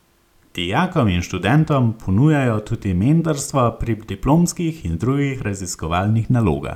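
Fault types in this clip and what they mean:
No technical faults can be heard in this recording.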